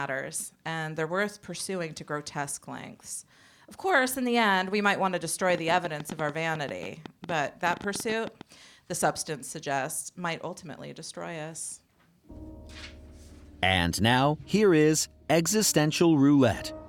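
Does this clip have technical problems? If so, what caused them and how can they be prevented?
Yes. From 5.50 to 8.42 s there is a train of clicks: roughly thirty sharp pulses at an uneven pace averaging about 11 per second, the loudest standing out well above the sound. They share one shape and continue regardless of the level beneath them, unlike clipping distortion, which only appears on loud peaks. The likely cause is electrical interference or a faulty connection or power supply. Shielding cables, moving away from noisy equipment and using a stable interface prevent it.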